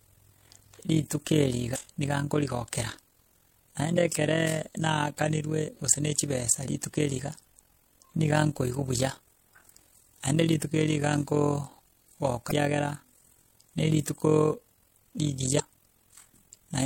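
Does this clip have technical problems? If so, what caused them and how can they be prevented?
Yes. Overlap-add ripple runs throughout: frames rejoined with mismatched windows make the level pulse by about 11 dB around 40 times a second. Unlike tremolo, it stays locked to the frame rate. Prevent it by choosing a window and overlap that sum to a constant gain.

Damaged data in a compressed stream causes brief glitches at 1.71–1.76, 3.93–3.98, 12.48–12.52 and 15.56–15.60 s. The decoder misreads corrupted frames and loses sync while searching for the next frame header, unlike clean dropouts, which are silent gaps. Prevent it by verifying transfers with checksums and keeping metadata out of the audio payload.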